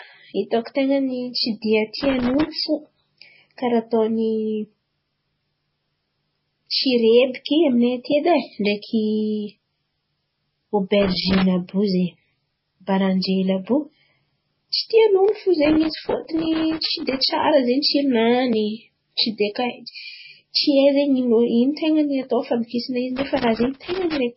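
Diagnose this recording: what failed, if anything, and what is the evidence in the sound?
Transcoding between lossy codecs, throughout the speech: nothing survives above 5.6 kHz, and smeared, swirly codec artefacts are heard together with those of a second coding layer. This is likely a codec-stage fault: a low-rate MP3 encode re-encoded to WMA at a higher rate. The later WMA pass spends bits preserving the earlier damage and adds its own, while the earlier cut-off remains.

Loose connector crackle in the analogue wiring stage, at 1.97–2.48 s, 11.03–11.42 s, 15.65–17.45 s (after "tsy tian'olo fo") and 23.17–24.17 s (after "atao fandokisana izy"). Irregular scratchy bursts chop the signal as a worn or dirty contact makes and breaks.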